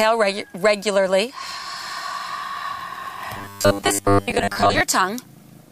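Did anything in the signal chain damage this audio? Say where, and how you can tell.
Yes. From 3.37 s to 4.81 s the audio turns into a rigid, metallic buzz with a fixed pitch of 100 Hz, still loosely following the contour of the sound. This is robotic sound from repeated short buffers, likely at the driver or buffer stage. New audio arrived too seldom, so a 10 ms block was replayed to fill the gaps. Roughly 70% of that stretch is repetition rather than real signal, and the 10 ms repeat sets the 100 Hz buzz.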